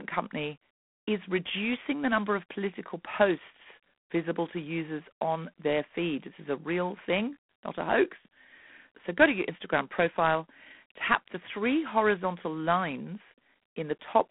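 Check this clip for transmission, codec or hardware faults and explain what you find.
The clip has been through G.726 ADPCM coding for its full length. The encoder sends only a few bits per sample, each one the difference between the signal and an adaptive prediction. The coarseness points to the 24 kbit/s mode. Too few bits leaves plainly audible quantisation noise: a harsh, rasping hiss that rises and falls with the speech level. The telephone band limits the sound to roughly 200 Hz to 3.4 kHz, with nothing above 3.8 kHz.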